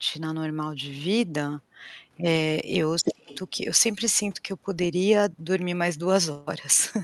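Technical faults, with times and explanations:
2.97–3.39 s, other side's voice leaking through: a second voice breaks in for about 0.4 s at roughly the same loudness as the talker. It is likely the far end playing on the talker's loudspeaker, picked up by the microphone and only partly removed by the echo canceller.
3.02–3.33 s, speech suppressed in double talk: inside that leak, the talker's own voice drops sharply, by around 30 dB at its deepest, for about a third of a second. Both sides were likely talking at once, so the echo canceller turned everything down.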